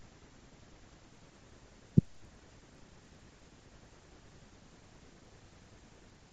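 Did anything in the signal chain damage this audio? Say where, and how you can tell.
Yes: at the converter stage, from 1.05 s the 16 kHz to 48 kHz resampler restarted on every block, ticking at 20 Hz (50 ms edges). Unlike hum, it stops in pauses.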